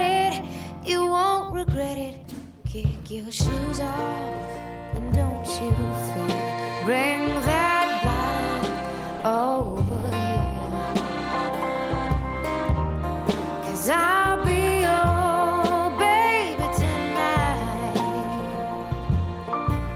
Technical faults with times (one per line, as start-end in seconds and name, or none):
9.16-10.83 call bitrate drop